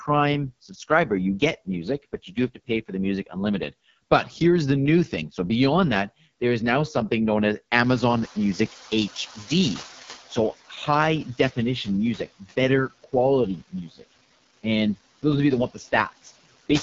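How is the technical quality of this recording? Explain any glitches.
The quality is poor. It carries heavy low-bitrate codec damage and noise suppression faults throughout, with several moments where the suppressor mishandles the speech or the noise.

Noise suppressor artifacts run through the whole clip. A noise suppressor lowers, frame by frame, the frequency bands it judges to be steady noise, here by about 15 dB. The background therefore sinks in the gaps and rises under the speech.

AMR wideband (HD Voice) codec damage is also present throughout and is heavy. The sound has the rough, raspy texture this codec produces at its lowest rate, which fits the 6.6 kbit/s mode. Speech is modelled up to 6.4 kHz, the band above is filled with shaped noise, and nothing reaches past about 7.5 kHz.

Speech cut by the noise suppressor happens three times:
From 0.68 to 3.72 s, roughly 0.4 s of speech is pulled down by up to about 17 dB.
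From 11.25 to 14.65 s, roughly half a second drops by up to about 21 dB.
From 15.22 to 16.7 s, a brief stretch drops by up to about 13 dB.

In each case the suppressor mistook soft parts of the speech for noise, so consonants or word endings sound swallowed.

Noise suppressor catching up occurs from 7.84 to 10.55 s, just after "now something known as". The room noise, which is part of the recording, jumps by about 21 dB near 8 s. The suppressor's noise estimate lags behind this jump, so the noise first comes through with less reduction. It then sinks over about 2.7 s to roughly 10 dB of reduction.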